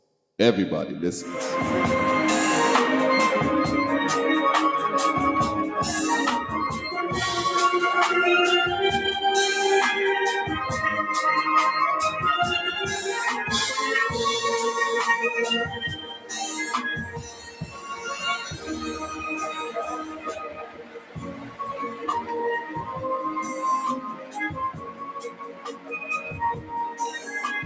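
A speech-tuned noise suppressor stays on throughout, treating steady sound as noise and pulling it down by up to about 15 dB, so the level pumps and thins. The same noise suppressor cuts sound at 0.0–0.37 s, 15.67–16.78 s, 16.99–19.24 s, 19.56–22.31 s, 22.6–23.04 s, 23.4–23.63 s and 23.96–27.39 s. Held and fading parts sink by about 5 to 15 dB while onsets survive. Nothing reaches above 8 kHz, as the call microphone processing passes it.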